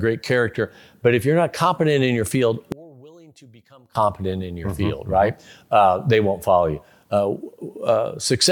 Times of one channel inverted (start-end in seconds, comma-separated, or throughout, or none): 2.72-3.95